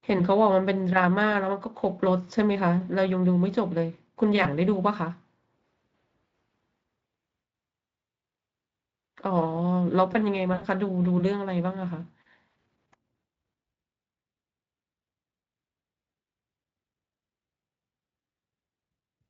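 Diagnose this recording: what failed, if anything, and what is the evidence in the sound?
The network stage failed: this is VoIP packet loss concealed by the speech codec, and it happens twice. There's a brief smear from 4.43 to 4.47 s, about 20 ms of missing audio, which fits a single lost frame. The bigger one runs from 10.53 to 10.64 s, roughly 80 ms, which fits four frames in a row. With no packets arriving, the decoder kept stretching its last pitch and filter while turning the gain down, so the speech is stretched into a buzzy tone or a coloured noise that fades. It stays weak for a moment after packets resume, because each frame is built from the one before. The Speex stream itself sounds only lightly processed.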